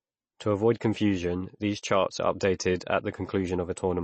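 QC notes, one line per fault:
Throughout: MP3 compression. Nothing remains above about 8.3 kHz, so the speech sounds dull and closed-in, and the damage is plainly audible as a watery, swirling texture with chirpy, metallic edges on s sounds and softened consonant attacks. The likely cause is a starved MP3 encode, which fits a bitrate near 32 kbps: the encoder drops the treble at a fixed cut-off and zeroes weak frequency lines that flicker on and off between frames.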